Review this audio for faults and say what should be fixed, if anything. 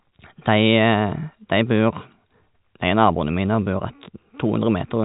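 Nothing here needs fixing: the speech is carried over ordinary G.711 telephone coding, heard as a band that stops at about 3.8 kHz with at most a faint level-following hiss, which fits a 64 kbps mu-law line.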